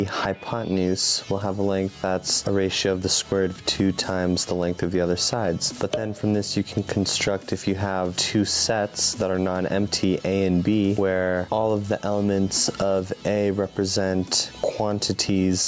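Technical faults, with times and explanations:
Throughout, gain pumping: the input gain was likely set far too high for the microphone, so a fast limiter or compressor clamps down on every loud sound and lets go again in the gaps. The level swings by around 10 dB, and loud and soft parts are squashed close together beneath the call processing's top end near 8 kHz.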